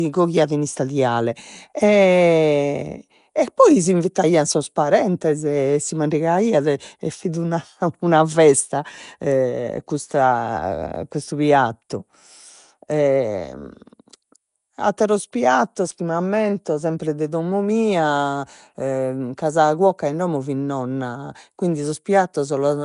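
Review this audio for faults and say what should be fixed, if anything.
All the way through, the speech has a rough, hissy halo and a smeared, underwater feel, with nothing above 10.6 kHz, which is likely Nellymoser compression padding starved bands with noise. Capture it without that Flash-era codec, ideally to an uncompressed file or a modern codec like Opus.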